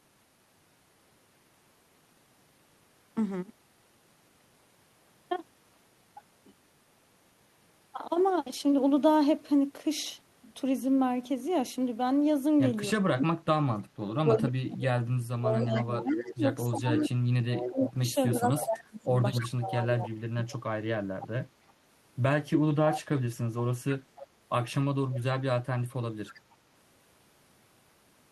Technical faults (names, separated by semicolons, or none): speech suppressed in double talk; echo leak